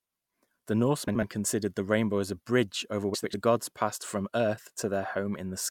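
Speech, with two brief stretches where frames were played out of order. From 1.08 to 1.23 s, just before "considered the rainbow as", two adjacent blocks of about 72 ms each swap places. At 3.14 to 3.34 s, between "as a bridge over" and "gods passed from", the same happens with blocks of about 96 ms. Each spot comes out as a garbled flutter, and no time is lost because the swapped halves simply exchange positions.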